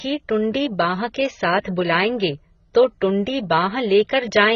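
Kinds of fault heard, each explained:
AAC compression: The speech stops sharply at about 7.1 kHz, and what remains sounds dull and smeared, with a warbling, fizzy texture on sibilants and held sounds. This is heavy damage from a transform codec short of bits, likely AAC-LC at a rate pointing to about 16 kbps. A plain low-pass filter only dulls the top. Here, spectral holes and noise-filled bands make the texture shift and churn from frame to frame.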